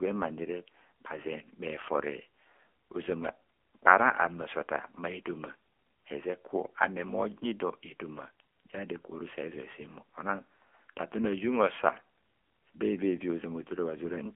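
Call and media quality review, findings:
AMR narrowband mobile codec throughout, low mode fitting 7.95 kbps: speech held to 250 Hz–3.4 kHz, nothing past 3.6 kHz; sparse pulse excitation makes it buzzy and synthetic.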